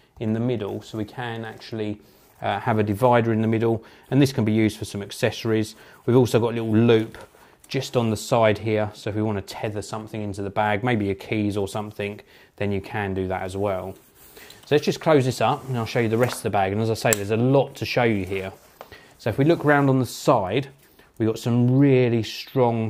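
No technical faults are audible anywhere in the recording.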